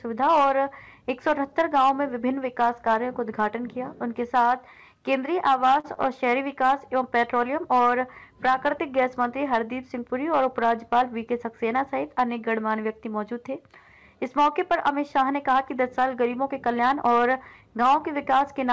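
At 5.80 to 5.86 s, and again at 5.94 to 5.98 s, there is a short stall from a late packet. Each time the jitter buffer ran dry. The receiver held the last sound for 40 ms, then 22 ms, and resumed where it stopped. The sound drags briefly, with a faint buzz or dip during the hold.

From 16.75 to 17.62 s comes a jitter buffer speed-up. Too much audio had built up, so the receiver cut short pitch-period pieces, about 40 ms in all. Playback runs at 104% speed with pitch unchanged. The call path's band edge at 8 kHz fits a G.722 codec.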